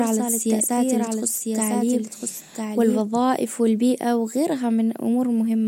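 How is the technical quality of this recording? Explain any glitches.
The recording has one clear fault, a doubled audio track. From the start until 3.0 s, the speech is heard twice: a second full-band copy trails about a second behind the original, roughly 5 dB quieter, with no decay or room colour, so it sounds like overlapping talk rather than echo. It is already under way when the clip begins and cuts off abruptly at 3.0 s. The likely cause is the same signal being captured again through a slower path, or an edit holding two copies out of step.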